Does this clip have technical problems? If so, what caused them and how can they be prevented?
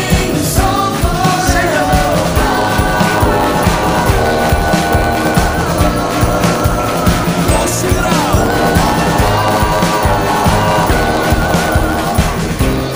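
Yes. From 2.14 s to the end, a block size mismatch (truncated): one stage writes longer blocks than the next reads, which fits a 512-sample block, and the tail of each is discarded. This causes a 91.9 Hz buzz and plays the audio 1.07 times too fast, though the timbre holds. To prevent it, make every stage in the chain agree on a single block size, or put a proper buffer between them.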